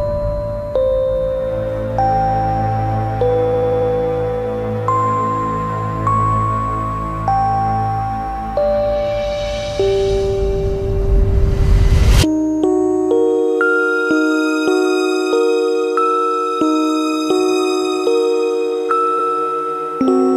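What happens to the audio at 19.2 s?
From 19.18 to 19.27 s there are repeated frames: a block of about 93 ms, which fits four compressed frames, was sent twice, so it plays once more and the audio runs 93 ms longer. It sounds like a brief stutter. On a spectrogram or waveform, the same pattern appears twice back to back.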